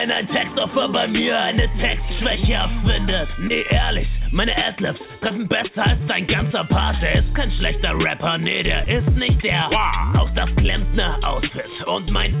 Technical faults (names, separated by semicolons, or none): short concealed packet loss